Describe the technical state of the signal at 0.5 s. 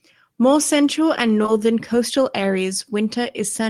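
At 0.5 s the speech signal is intact, with no audible fault at that point.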